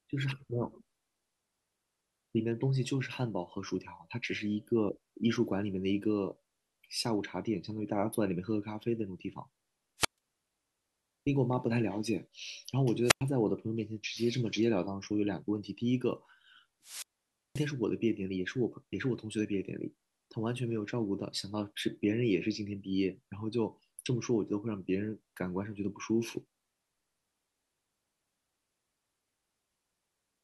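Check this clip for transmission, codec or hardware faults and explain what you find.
Three wireless microphone squelch dropouts occur, at 9.98–10.18 s, 13.03–13.22 s and 16.82–17.71 s. Each time the analogue FM signal fades, hiss rises briefly, and the receiver squelch mutes the speech for 0.13 s, 0.10 s and 0.53 s respectively.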